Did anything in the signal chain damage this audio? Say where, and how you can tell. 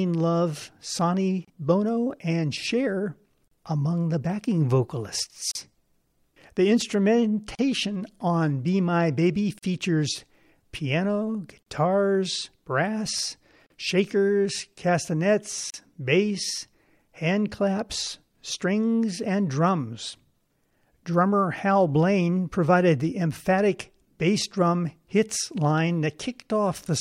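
Yes. Short holes of silence open in the continuing speech at 1.45, 3.48, 5.51, 7.55, 9.59, 11.63, 13.66 and 15.70 s, spaced every 2.0 s. The first lasts about 29 ms and the rest about 38 ms, each with smeared edges, and the speech resumes where it stopped. This is a gap at a join of encoded pieces. The audio was encoded in 2-second segments and spliced without trimming, so each encoder's start-up silence and final-frame padding remain at every seam.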